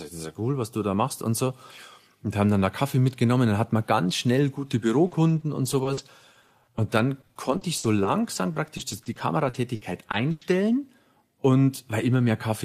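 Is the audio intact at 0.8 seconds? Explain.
Yes, the audio is intact at 0.8 seconds, with no dropout, click, distortion or other audible fault at that point.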